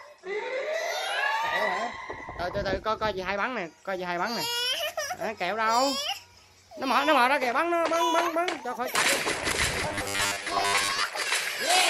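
From 9.89 to 11.06 s, new audio likely arrived too seldom, so the last 10 ms was replayed over and over while most of the real signal was skipped. The result is robotic sound from repeated short buffers: a rigid, metallic 100 Hz buzz.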